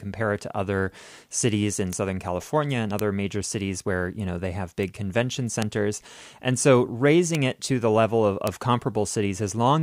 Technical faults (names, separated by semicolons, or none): bit error spike